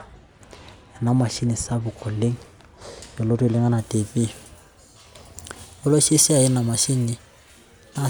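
Speech that sounds dull and muffled from 0 to 3.78 s, where de-emphasis was applied wrongly, tilting the treble smoothly down about 13 dB at 10 kHz, a gradual slope rather than a low-pass's sharp cutoff.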